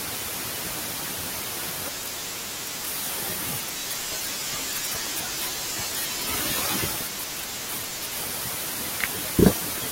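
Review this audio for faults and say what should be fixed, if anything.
Loud pop at 5.07 to 5.09 s: a single sharp pop cuts across the speech, peaking a few decibels above it, while the talking carries on underneath without a break. A sudden voltage step or pulse entered the signal chain, most likely from a connector being touched, a switch, a static discharge or a driver glitch, and the downstream circuitry shaped it into this brief transient. Secure the cables and connectors, ground the setup properly, and avoid switching or touching equipment during recording.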